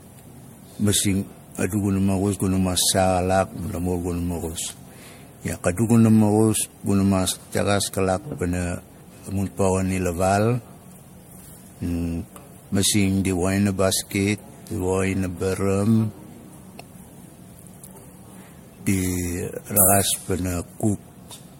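Speech sounding swirly, hollow and smeared throughout, with blurred attacks and nothing above 16.7 kHz, likely generation loss from around four MP3 passes near 62 kbit/s.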